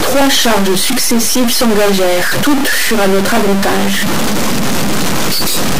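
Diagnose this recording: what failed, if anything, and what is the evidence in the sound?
At the converter stage, a stuck bit is the likely cause: one line of the sample word appears held at a fixed value for the whole recording. Every sample whose true value disagrees with that bit is pushed off by the bit's weight, so the speech carries a distortion that follows the waveform throughout. In the gaps between phrases the same error flips with the sign of the quiet signal, leaving audible noise where there should be near-silence.

At the driver or buffer stage, clock drift buffer slips are the likely explanation. Two devices seem to be running on separate clocks that differ by several hundred ppm, so the buffer between them creeps toward full or empty until a small block, on the order of a few dozen samples, is dropped or repeated. The result is a regular click about every 1.05 s, roughly seven times between 0.21 s and 5.48 s, heard over the speech.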